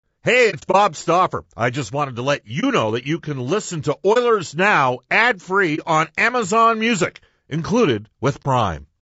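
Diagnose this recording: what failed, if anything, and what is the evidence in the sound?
The codec stage is at fault. The speech is rough and grainy all the way through. Noise sits between the harmonics, and the top band sounds thin and synthetic. This is likely low-delay AAC compression, and it fits AAC-ELD at around 32 kbps. Its short frames resolve pitch poorly.

Packets were lost on the network, and the decoder muted what was missing. This is AAC frame loss with muting. From 0.50 to 0.76 s there are scattered holes over about 240 ms, each roughly 30 ms long. Single 30 ms gaps follow at 2.60, 4.13, 5.75 and 8.42 s. The overlapping windows fade each hole softly.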